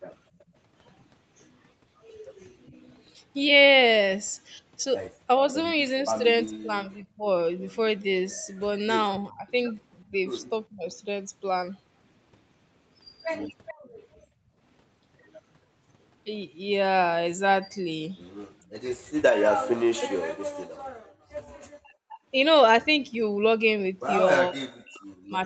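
From 0.37 to 0.48 s the echo canceller clamps the microphone while the far-end loudspeaker is active, producing background gated by the echo canceller: the room sound dips by about 15 dB for a brief moment and returns as the canceller releases. Inside that span, at 0.39 to 0.44 s, an echo leak appears, likely because the far side's canceller failed to remove all of its loudspeaker pickup. A very faint copy of the speech returns about 417 ms late.

Between 6.2 and 10.94 s both sides likely talk at once, and the canceller, unable to tell the local talker from echo, pulls everything down. This speech suppressed in double talk makes the voice sag by roughly 20 dB in patches adding up to about a second, and those patches sound dulled or broken.

From 13.66 to 14.27 s a stronger echo leak returns a delayed copy about 428 ms behind the original, at around 20 dB below the speech. Overlapping it, from 13.74 to 14.56 s, the background is gated by the echo canceller again, dropping by about 16 dB for roughly half a second.

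From 18.68 s to the end, double-talk suppression returns much more heavily. The voice is cut by as much as around 40 dB. Within this stretch, from 20.94 to 21.32 s, the canceller gates the background by about 33 dB for close to half a second. Throughout, the call path's 8 kHz bandwidth limit means nothing above 8 kHz is heard.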